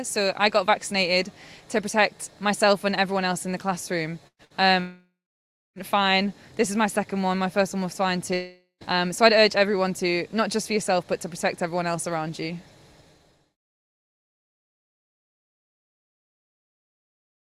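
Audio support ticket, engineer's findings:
Burst of packet loss at 4.27–4.42 s and again 4.45–4.53 s: the receiver's concealment stretches the last sound into a fading buzz or hiss, then goes silent for about 70 ms in the first one. About 120 ms and 60 ms of audio are skipped. Jitter buffer or network path.

Long network dropout, likely a stalled stream or dead link, at 4.80–5.79 s: the concealment fill fades into roughly 0.6 s of silence, and the audio comes back with about 960 ms gone. Same at 8.34–8.84 s: about 480 ms lost, ending in roughly 0.1 s of silence.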